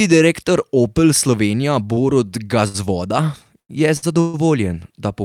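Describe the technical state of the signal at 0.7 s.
At 0.7 s the signal is intact, with no audible technical fault at that moment.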